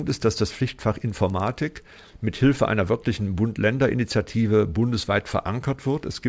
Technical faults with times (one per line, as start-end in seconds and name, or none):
0.00-1.50 resampler restarted on every block